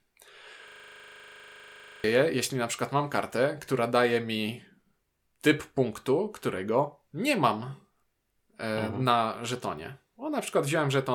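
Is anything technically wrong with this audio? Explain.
Yes. There is a system hang loop from 0.68 to 2.04 s, just before "jeśli na przykład mam". The system froze. The sound hardware kept replaying the same ring buffer. A 40 ms slice of speech repeats exactly, 34 times over. At 25 repeats per second, this is heard as a steady, rough buzz, not a stutter. The speech stops dead under it. About one and a half seconds of real audio is lost.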